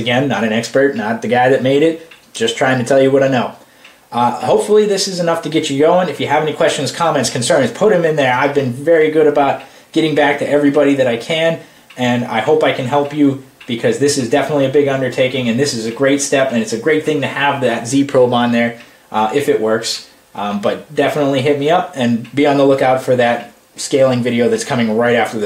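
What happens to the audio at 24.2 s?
Nothing goes wrong at 24.2 s; the audio carries on intact through that moment.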